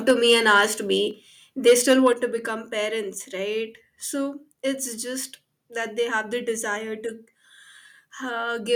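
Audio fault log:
0.09–0.61 s, microphone overload: the loudest syllables sound harsh and crackly with flattened peaks, likely from input driven about 3 dB past converter full scale, clipping a small fraction of samples.
0.11 s, microphone volume stepped down: voice and background drop abruptly by about 2 dB in one step, likely the call software cutting input gain after the clipped peak.
1.11 s, microphone volume stepped down: a second sudden drop of about 4 dB in both voice and background level, likely another automatic input-gain reduction.
1.67–2.08 s, microphone overload: stronger crackling distortion on the peaks, likely from input about 5 dB over full scale, with a few percent of samples clipped.
2.13 s, microphone volume stepped down: level falls abruptly by about 4 dB right after the distorted passage, likely the software lowering input gain again in response.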